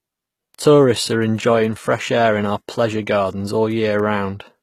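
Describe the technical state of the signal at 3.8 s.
At 3.8 s the speech carries word clock ticks, part of a run from 0.13 s to 4.55 s. The receiver is not locked to the sender's clock. As the clocks slip, a single sample drops or repeats. The result is sharp ticks roughly every 0.15 s, around thirty in all, of uneven strength. That fits a clock mismatch near 150 ppm.

The whole clip also has plainly audible codec damage, likely from HE-AAC compression. The treble is rebuilt from copied lower bands, so s sounds turn gritty and lispy. Nothing reaches above 14.9 kHz, which points to a low bitrate around 20 kbps.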